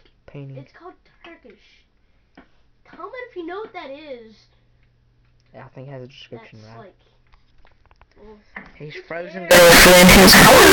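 From 9.51 s to the end, the audio turns into very loud, harsh distortion, with quiet moments blasting as hard as everything else. The likely cause is signed and unsigned mixed up: 16-bit samples read with the wrong sign convention, flipping the top bit so every zero crossing leaps across the full range.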